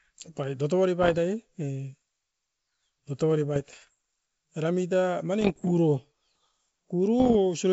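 Bit errors on an ADPCM link produce rough, popping bursts with brief level jumps at 1.02–1.19 s, 3.56–3.91 s, 5.41–5.65 s just after "muit a", and 7.20–7.37 s. Each flipped bit disturbs the decoder's step size and predictor, so the damage rings on briefly.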